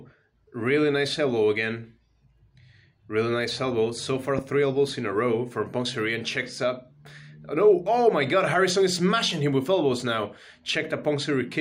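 A single loud pop at 4.39–4.41 s sits around 10 dB above the audio, likely an electrical pulse; the waveform shows a sharp spike and the spectrogram a thin vertical broadband line.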